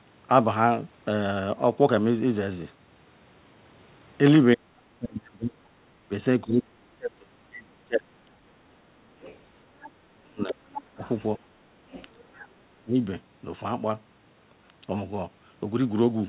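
Speech, carried over a narrowband call path whose spectrum stops at 4 kHz, consistent with G.711. Speech suppressed in double talk turns the talker down from 4.54 to 9.18 s (roughly three seconds lost, dips near 35 dB), 10.03 to 11.39 s and 12.13 to 12.95 s, likely the echo canceller ducking during overlap. These show as sudden drops in level. The other side's voice leaking through appears faintly at 9.21 to 9.91 s, 10.48 to 11.09 s and 11.91 to 12.48 s, about 15 to 25 dB under the talker. It appears as faint harmonic streaks under the talker.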